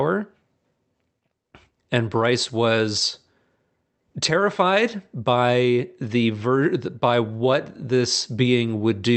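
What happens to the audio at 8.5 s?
At 8.46 to 8.48 s, one 20 ms stretch of speech is a lost packet rebuilt from error correction. The packet carrying that frame went missing, but the following packet held a low-bitrate redundant copy, and the Opus decoder played that copy in its place. There is no gap or dropout. Instead, that brief slice sounds rougher and noisier than the surrounding 64 kbps audio, a short grainy patch rather than silence.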